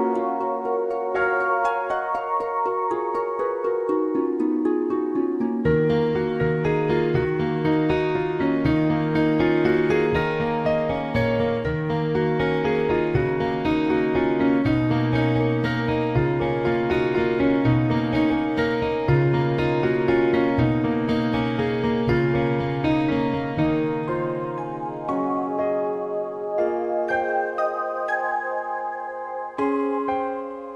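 No technical faults can be heard anywhere in this recording.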